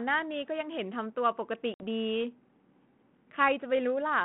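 At 1.74 to 1.82 s, packet loss on an ADPCM call drops about 60 ms, roughly three packets, to hard-edged silence. The decoder's predictor and step size have drifted from the sender's, so the speech returns slightly distorted before settling on the 32 kbit/s G.726 line, band-limited to 150 Hz–3.4 kHz.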